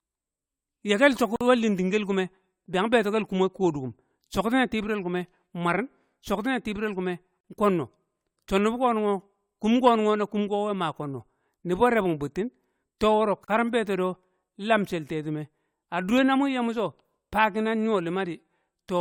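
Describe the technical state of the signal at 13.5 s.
At 13.44 s the speech runs into a gap at a join of encoded pieces: separately encoded segments, about 6 s long, were spliced without trimming encoder delay and end padding, so a gap of roughly 37 ms, ending at 13.48 s, cuts in with smeared edges before speech resumes.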